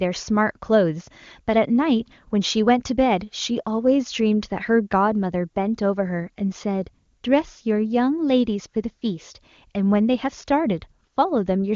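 The speech comes through the AMR wideband (HD Voice) codec with no audible faults, its sound fitting the codec's top 23.85 kbit/s mode.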